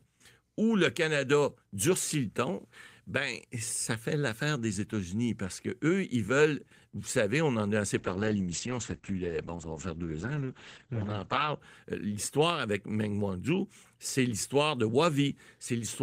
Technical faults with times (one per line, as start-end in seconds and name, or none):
7.99-11.65 call bitrate drop